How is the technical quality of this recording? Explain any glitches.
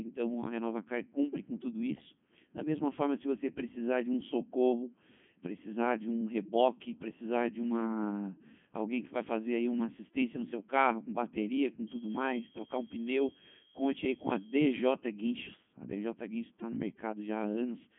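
Poor, because heavy Codec 2 vocoder damage runs through the whole speech clip. The decoder rebuilds speech from sine waves driven by pitch, voicing and envelope data, so the waveform is lost. It sounds robotic and buzzy, confined to 150 Hz to 3.4 kHz with nothing above 3.5 kHz, which fits Codec 2's top 3.2 kbit/s mode.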